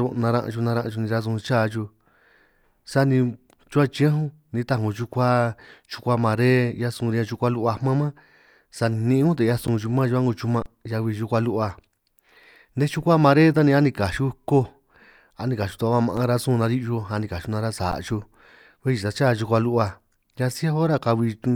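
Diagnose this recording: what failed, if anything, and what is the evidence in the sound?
Underruns with held sample in the driver or buffer stage: the waveform freezes flat for about 12 ms at 9.67 s, from 10.62 to 10.66 s (about 35 ms), for about 5 ms at 16.17 s, and for about 12 ms at 17.91 s. The 12 ms gaps fit a 512-sample buffer. The output buffer ran dry and the converter held its last value. Audio was lost each time. Unlike a dropout to digital silence, a held value usually sits off zero.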